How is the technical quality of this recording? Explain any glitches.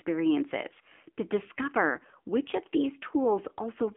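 The technical quality is poor throughout, because the whole recording has passed through the AMR narrowband mobile codec. The speech sits in a telephone band of roughly 250 Hz to 3.4 kHz, and nothing is heard above 3.7 kHz. The codec samples at 8 kHz and rebuilds each 20 ms frame from a vocal-tract model fed by sparse pulses. The damage is plainly audible. The voice sounds thin, buzzy and synthetic, which fits a low 7.4 kbps mode.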